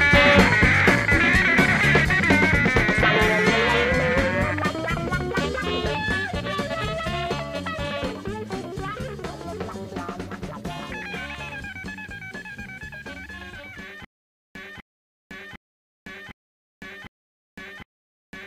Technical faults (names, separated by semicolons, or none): stutter with silent gaps